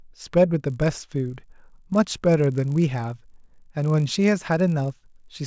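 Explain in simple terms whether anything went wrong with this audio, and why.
From about 0.6 s to 5.4 s there's a low buzz riding under the speech. That's a resampler restarted on every block: each chunk was converted on its own, leaving a tiny glitch at every seam, 50 times a second, which fits 20 ms blocks.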